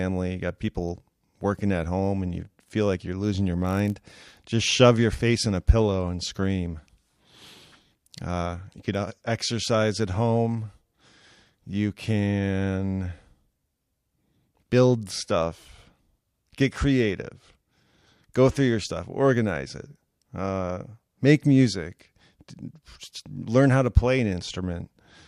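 From 3.64 to 4.45 s there's a block size mismatch (padded): zero-filled gaps in each block make a 46.9 Hz buzz, which fits a 1024-sample read, with timbre unchanged.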